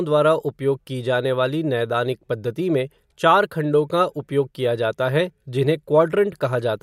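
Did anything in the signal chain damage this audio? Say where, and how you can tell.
No, nothing in this speech recording points to damage at any stage of the chain.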